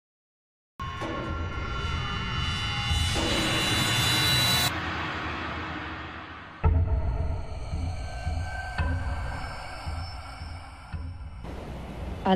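Right at the top there's a cut-off start: the first 0.80 s is pure digital silence, and then the audio just snaps in at 0.80 s already mid-sound. Nothing was capturing when that sound began, so you never hear its attack or any build-up. It lands abruptly, as if someone hit record a beat too late, and the opening of whatever was happening is simply missing.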